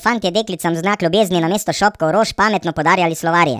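From start to finish the speech sounds high and hurried, chipmunk-like, running about 1.45 times faster than natural and pitched roughly 6.45 semitones up, with speed and pitch shifted together. That coupling is the mark of a wrong sample rate: the samples were played back faster than they were captured, with no conversion between the two. The ratio fits audio recorded at about 22 kHz being played out at 32 kHz.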